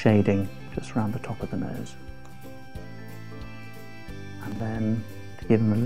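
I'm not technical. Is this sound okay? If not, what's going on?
No. At 0.6 to 0.72 s and 4.52 to 4.6 s, chunks play out of order: short 40 ms pieces arrive late and sound jumbled, but nothing goes missing, unlike a dropout.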